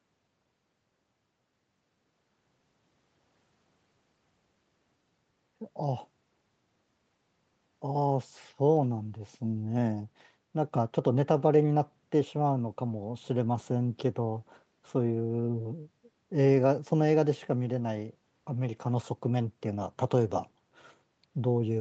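Speech carried over a call link, with nothing above 8 kHz as expected from the microphone processing and a wideband call codec, and no technical faults present.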